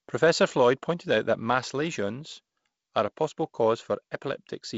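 Nothing here counts as a fault; the speech simply comes over a G.722 wideband telephone link, with the slightly grainy, faintly hissy texture you'd expect from a bitrate that fits 48 kbit/s, and nothing at all above about 7.7 kHz.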